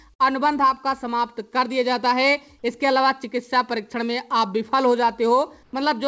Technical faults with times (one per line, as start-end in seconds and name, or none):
0.14-0.21 burst of packet loss
5.63-5.73 comfort noise in place of the background